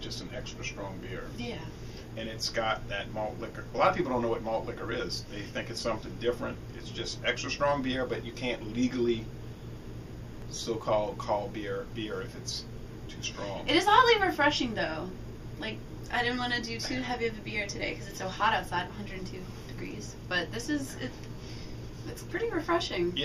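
At 10.42 s and again at 17.80 s there is a repeated buffer: fresh audio arrived late, so the output replayed its last block, about 5.33 ms long, which fits a 256-sample buffer. It repeats once at 10.42 s and twice at 17.80 s, so a few milliseconds of sound go missing. Each is heard as a click or brief buzz. The waveform shows an identical segment copied with a step at each join, and the spectrogram shows a thin vertical broadband line.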